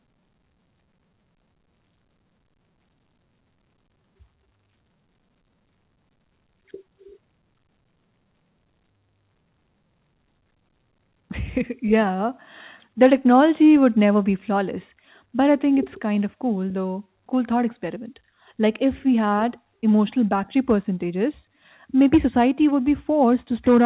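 No faults can be heard anywhere in this recording.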